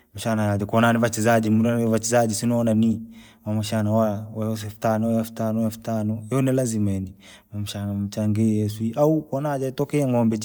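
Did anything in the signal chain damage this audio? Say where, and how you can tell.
Yes. Bluetooth LC3 compression affects the speech from start to finish, most likely introduced at the codec stage of a wireless link. The damage is plainly audible as a breathy, grainy edge on the speech. The codec discards detail in parts of the spectrum and fills the gaps with shaped noise. The grain fits 10 ms transform frames at around 48 kbps. The bandwidth still reaches 20.2 kHz, so the damage is texture rather than a cutoff.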